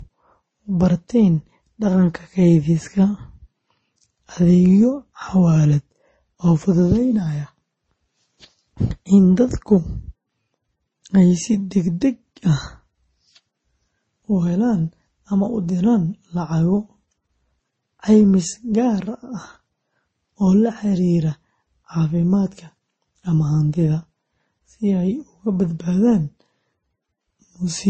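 Throughout the speech, nothing is heard above about 8.3 kHz, and several kinds of swirly, smeared codec artefacts are layered together. This points to transcoding between lossy codecs, likely a low-bitrate MP3 passed through Opus and then Vorbis, each encode compounding the earlier damage.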